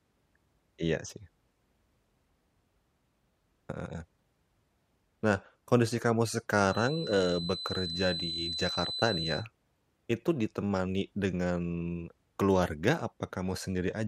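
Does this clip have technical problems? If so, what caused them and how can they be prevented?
Yes. Right after "kondisi kamu", from 6.60 to 9.47 s, a thin feedback whistle sits at 4 kHz, roughly 10 dB below the speech and swelling and fading slowly. On a spectrogram it shows as a lone horizontal line. The likely cause is a loudspeaker-to-microphone loop held just at the edge of feedback. Prevent it by lowering monitor gain, moving the microphone away from the speakers, or notching 4 kHz.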